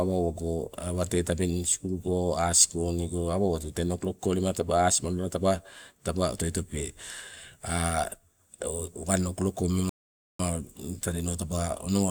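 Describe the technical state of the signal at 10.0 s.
At 10.0 s the speech sits inside a rebuffering stall, 9.89 to 10.40 s: playback starved and fell silent for 0.5 s, then resumed exactly where it stopped, unlike a dropout, which loses audio.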